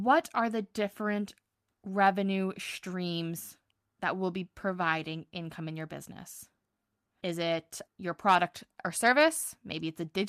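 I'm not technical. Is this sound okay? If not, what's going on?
Yes, this speech recording sounds technically sound, with nothing going wrong in the signal at any point.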